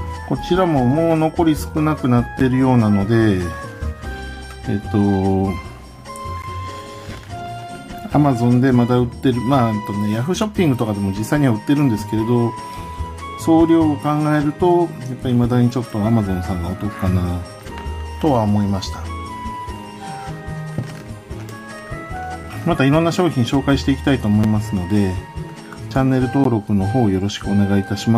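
Gaps between stream segments leave hard-edged silences at 2.39, 6.42, 22.43, 24.44 and 26.44 s. Misaligned timestamps at 2 s segment boundaries insert 4 to 14 ms holes.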